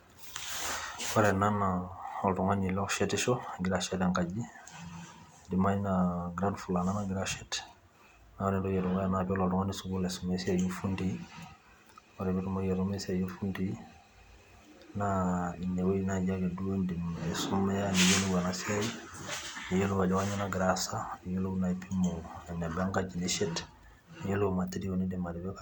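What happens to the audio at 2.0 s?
At 2.0 s the speech carries on without any audible fault.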